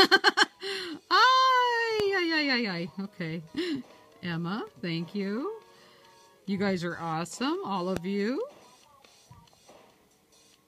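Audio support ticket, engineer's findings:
Loud pop, two single events at 2.00 to 2.02 s and 7.97 to 7.99 s, peaking well above the signal (about 15 dB, then about 10 dB). Sharp transient, with the sound continuing underneath. Cause likely a voltage step from a connector, switch, static discharge or driver glitch.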